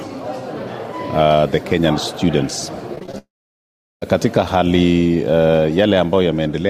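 Between 2.95 and 3.14 s the audio turns choppy, with small bits missing. This is repeated packet loss (robotic sound): several short holes in quick succession, none longer than about 19 ms, were each patched by repeating the preceding sound, so concealment covers about 41% of that stretch. From 3.18 s the sound briefly smears into a fading buzz or hiss, then drops to silence for about 0.75 s before returning at 4.02 s with roughly 0.84 s of material gone. The likely cause is a long network dropout, where no audio arrived and the receiver extended the last sound until it died away.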